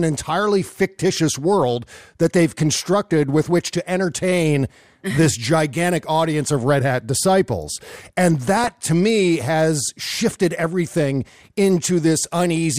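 DAB burbling hits twice, around 2.78 to 2.81 s after "fictitious world that they've" and from 8.42 to 8.86 s before "me has shifted everything". Bit errors slipped past error correction into the MP2 data, putting short blips of noise into single sub-bands.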